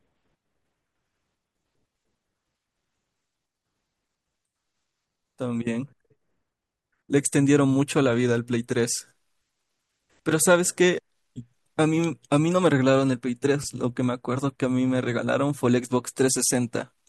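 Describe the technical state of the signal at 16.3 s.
At 16.3 s the speech signal is intact, with no audible technical fault at that moment.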